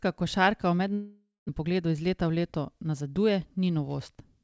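Speech, with a gap right after "košarka v" from 0.94 to 1.51 s: the sound trails into a fading buzz, then sits near-silent for about 150 ms before resuming with roughly 400 ms lost, likely a long network dropout rather than a brief concealed packet loss. From 1.64 to 3.01 s a jitter buffer speed-up runs the speech about 9% faster at unchanged pitch, trimming around 150 ms. Unlike a resampling error, it doesn't raise the pitch. Through all of this, nothing above 8 kHz reaches the ear, which fits a G.722 call path.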